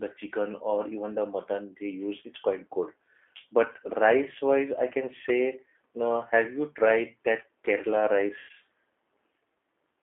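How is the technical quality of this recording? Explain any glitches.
Technical quality is limited by a narrowband speech codec throughout, plus one short dropout near the end.

G.729 codec (whole clip): The audio is confined to roughly 300 Hz to 3.4 kHz, and the codec damage is plainly audible. Speech is rebuilt from a vocal tract filter, a pitch predictor and a few pulses per frame, which gives a rough, slightly synthetic texture consistent with an 8 kbit/s G.729A stream.

VoIP packet loss concealed by the speech codec (8.39 to 8.51 s): About 100 ms of data is missing, which fits roughly five 20 ms packets. The decoder fills the gap by extrapolating its last pitch and filter state at falling gain, so the speech smears into a fading buzzy tone or coloured noise, and the next few frames sound weak or distorted.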